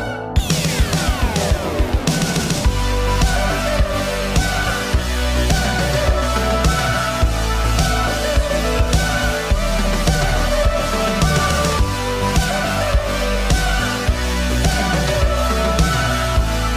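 No technical faults can be heard anywhere in this audio.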